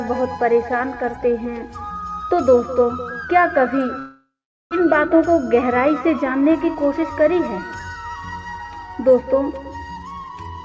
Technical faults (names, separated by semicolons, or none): long network dropout; jitter buffer speed-up